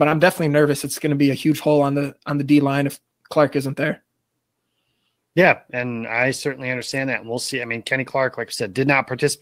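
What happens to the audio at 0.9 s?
Nothing goes wrong at 0.9 s; the speech carries on intact through that moment, with no dropout, click or distortion.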